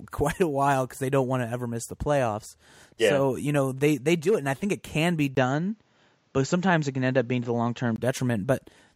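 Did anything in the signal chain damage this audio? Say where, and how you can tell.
Yes. Right after "think it can be", at 5.35 s, there is a gap of about 20 ms, and then the speech loses everything above 7.6 kHz and picks up a new, low background noise, while the loudness stays much the same. At 7.98 s the full band returns. This points to the driver or device stage: the input likely switched to a poorer device mid-recording, one with a narrower band and its own noise, and then switched back.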